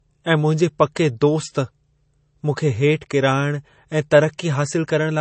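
Speech, with a hard ceiling running the whole way through: nothing sits above 8.3 kHz, so sibilants sound dull and the audio has the swirly, smeared texture of heavy MP3 coding. On a spectrogram this shows as a flat, sharp-edged cut-off at 8.3 kHz with empty space above it. The likely cause is low-bitrate audio saved at a high bitrate, an MP3 source that fits around 32 kbit/s re-encoded at a far higher rate, which kept the first encoding's losses and cut-off intact.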